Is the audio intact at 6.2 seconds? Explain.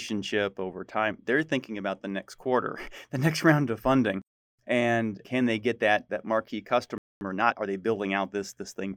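Yes, the speech at 6.2 seconds is intact, with no audible dropout, click, distortion or other fault at that moment.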